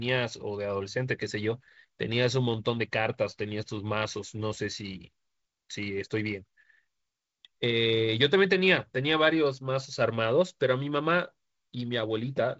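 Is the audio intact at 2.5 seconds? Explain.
Yes, at 2.5 s the speech is intact, with nothing breaking up the wideband telephone-coded sound at that moment.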